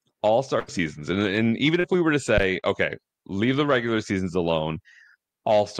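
A speech recording with three kinds of transmission and hardware fault. At 0.59 to 0.70 s, just before "and and even", a burst of packet loss leaves about 85 ms of the last sound stretched and fading, and roughly 80 ms of audio is skipped, so the speech jumps ahead. Its length sets it apart from the shorter losses. Short concealed packet loss occurs at 1.80 to 1.86 s, between "and and even" and "we were to", and again at 2.60 to 2.65 s, before "okay leave the regular". Each is a brief smear lasting 35 to 37 ms, with about 40 ms of real audio missing, heard as a wobble rather than a held tone. At 2.38 to 2.47 s a phantom power thump gives a deep low-frequency knock that dies away within about 20 ms. Unlike packet loss, it adds a sound on top of the speech instead of replacing it.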